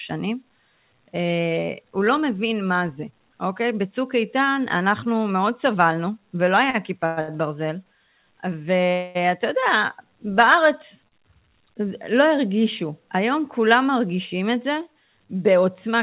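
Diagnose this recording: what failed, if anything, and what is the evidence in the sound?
Sound hangs with a faint buzz or dip for 38 to 70 ms at 6.70, 7.21 and 11.08 s. These are short stalls from late packets that drained the jitter buffer at the network stage.

A fading buzz or hiss holds the sound from 7.06 to 7.19 s and from 8.93 to 9.17 s, then resumes where it stopped. These are call audio freezes, likely from network-delayed packets.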